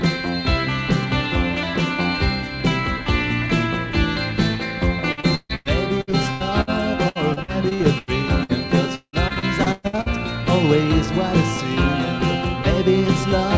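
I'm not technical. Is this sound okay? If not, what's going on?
No. Repeated packet loss (robotic sound) hits 5.12–6.70 s and 7.09–10.09 s. Small pieces keep dropping out and get patched over, so it sounds choppy.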